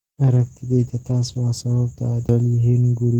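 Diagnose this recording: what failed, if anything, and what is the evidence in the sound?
Call bitrate drop, 0.34 to 2.77 s, at the network and codec stage: the speech turns rough and muffled as the encoder's rate falls from 32 to 12 kbps, holding its lowest for about 1.4 s. With fewer bits, quantisation coarsens and the high band is trimmed away.

CD skip at 2.28 s, a storage and playback fault: a brief tick and a mute of roughly 5 ms, after which the speech resumes from a different point. The laser lost its track and jumped to another turn of the disc's spiral.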